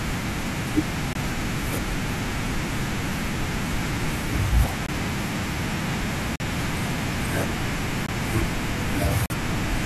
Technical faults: block of digital silence

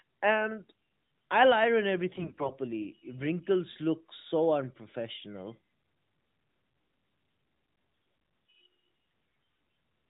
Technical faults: AMR bit errors

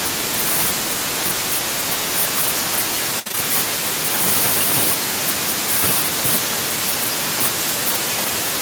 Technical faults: repeated packet loss (robotic sound)

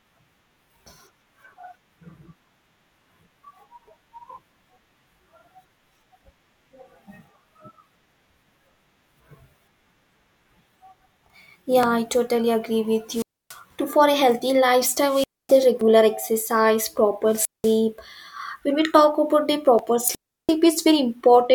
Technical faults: audio missing between chunks; wireless microphone squelch dropout

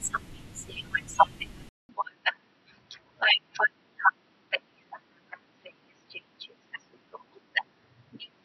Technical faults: input switched to a poorer device

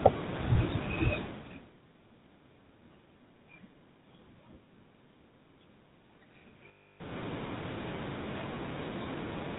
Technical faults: GSM full-rate codec; lost GSM frames

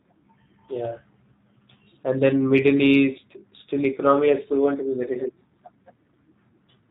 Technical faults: G.729 codec; VoIP packet loss concealed by the speech codec

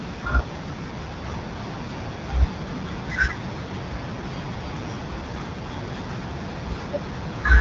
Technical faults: AMR wideband (HD Voice) codec

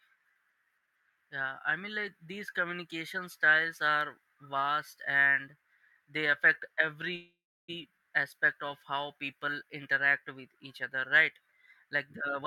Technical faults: call audio freeze; jitter buffer speed-up

